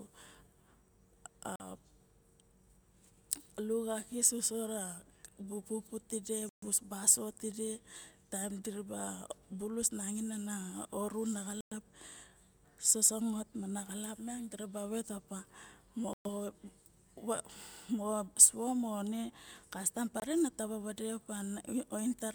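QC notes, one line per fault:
1.56, 6.49, 11.61, 16.13 and 20.20 s (the last just before "taba vade"): Bluetooth stall. The speech drops to silence for 42, 133, 108, 118 and 22 ms, then resumes. This is likely an interference-starved headphone buffer running dry until resent packets arrive.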